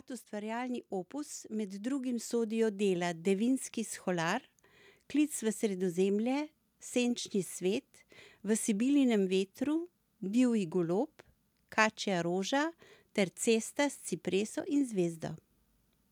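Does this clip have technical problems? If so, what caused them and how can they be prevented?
Yes. From 0.29 to 3.54 s the automatic gain control is rising: it judged the input too quiet and lifted its gain by about 8 dB over roughly three seconds. Voice and background noise swell together, which separates this from a speaker moving closer, where only the voice would grow. Disabling automatic gain and setting a fixed input level before recording prevents it.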